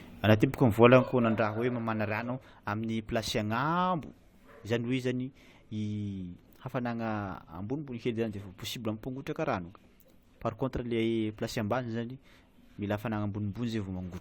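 Speech, no technical faults heard.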